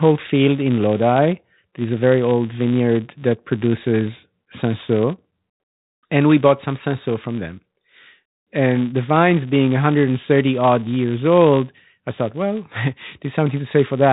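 From start to end, the speech carries a buzz at 200 Hz. It comes from a filter restarted on every block. The filter loses its memory at each block edge. Each block opens with a small click. These clicks repeat 200 times a second, which fits blocks of 5 ms. The buzz rises and falls with the speech level. It sits over telephone-band audio that stops near 3.8 kHz.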